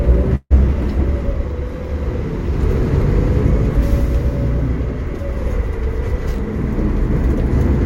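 A recording of everyday sounds with a burst of packet loss from 0.35 to 0.52 s. The receiver stretches and fades the last sound over 150 ms, ending in 40 ms of silence, while 140 ms of audio never arrives. Unlike a plain dropout, the gap is filled rather than abruptly silent.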